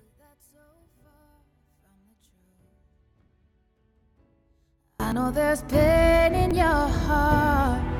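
One channel inverted, from the start to about 5.0 s: the summed sound drops by about 38 dB, leaving only a faint residue. The likely cause is reversed polarity on one stereo channel. Whatever the two channels share then cancels in the mono sum, and only their small differences survive. At about 5.0 s the full, solid sound returns abruptly.

Dropped buffer (overrun), at 3.29 s, 5.12 s and 6.51 s: each is a sudden jump forward in the sound with no gap of silence. Around 20 ms goes missing at 3.29 s and 6.51 s, and around 40 ms at 5.12 s. The program likely failed to read its samples before the hardware overwrote them, so the surviving audio on either side is spliced straight together.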